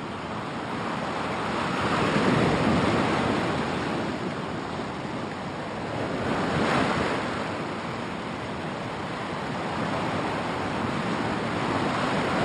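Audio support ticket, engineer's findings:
Imaging from linear upsampling, present for the whole clip. Top of the band dull, with a faint metallic shimmer on high, bright sounds. Mirror image sits between 6 kHz and 12 kHz, roughly 25 dB below the signal. Fits a 12 kHz source raised to 44.1 kHz by straight-line interpolation. Weak filtering leaves spectral copies above the original band. Probable component: resampler stage.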